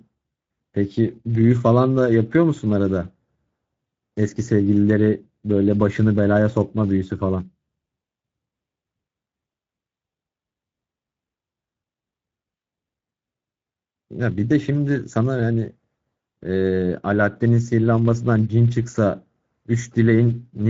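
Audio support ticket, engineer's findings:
Speex codec damage across the whole clip. Speech hoarse and grainy; audible throughout. Nothing above about 7.7 kHz; upper band a hissy, noise-like fill rather than real detail. Component: Speex CELP encoder, wideband mode, sound consistent with a setting near 16.8 kbps. Mechanism: too few bits for the excitation signal, so the vocal tract model is driven by a coarse approximation.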